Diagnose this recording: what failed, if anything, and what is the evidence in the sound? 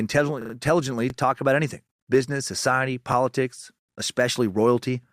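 Repeated frames at the codec or storage stage: from 0.41 to 0.53 s, just before "talk about anything business", a 40 ms block stutters three extra times, adding 120 ms.

Overlapping chunks in the buffering stage: at 1.1 s there's a click where about 21 ms plays twice, as a 2-second chunk starts before the previous one finished.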